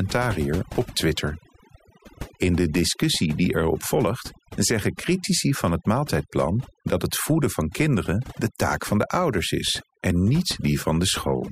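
Speech recording with overdone noise removal throughout: the suppressor was set too hard, so the background drops and breaks up into twinkling specks.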